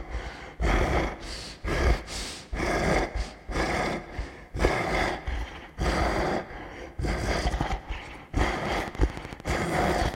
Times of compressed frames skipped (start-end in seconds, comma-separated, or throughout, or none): none